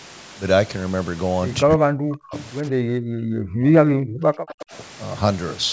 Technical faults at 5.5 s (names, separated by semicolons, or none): none